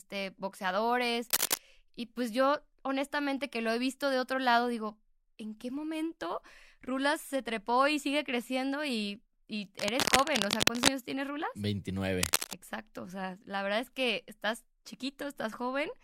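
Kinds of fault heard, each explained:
Cable scratch noise: ragged, rasping bursts roughly as loud as the speech, likely from a worn connector or cable being moved; the longest follows "y sigue creciendo y". Unlike steady hiss or isolated clicks, it arrives in short, irregular stretches up to a second long.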